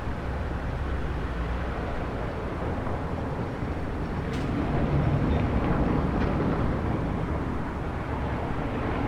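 Imaging from linear upsampling runs throughout this everyday-sound recording. The top of the band is dulled, which points to audio at 24 kHz raised to 44.1 kHz by straight-line interpolation. That leaves a faint mirrored copy of the spectrum between 12 and 24 kHz, roughly 50 dB below the signal, heard as a slight metallic shimmer on bright, high content.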